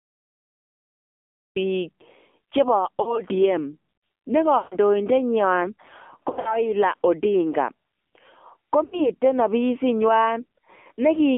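Throughout, the speech carries AMR narrowband mobile codec damage: a buzzy, synthetic texture at 7.4 kbps inside a 250 Hz to 3.4 kHz band, rougher than a plain telephone band-limit. The opening is a cut-off start: digital silence until 1.56 s, where sound begins abruptly mid-sound with no attack, unlike a fade-in. Lost AMR speech frames follow at 3.02 to 3.21 s (60 ms scattered over 160 ms), 4.58 to 4.76 s (a 140 ms run), 6.30 to 6.61 s (100 ms, longest run 60 ms) and 8.84 to 9.10 s (80 ms). Each is heard as a smeared, decaying warble instead of a hard silent gap.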